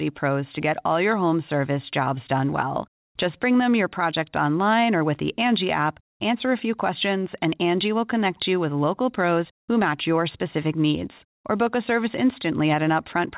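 Gain pumping runs throughout the clip. The gain swings by about 5 decibels as it is pulled down under louder speech, likely a fast limiter reacting to excessive microphone gain. The top end stops at 4 kHz, which fits a G.711 telephone codec.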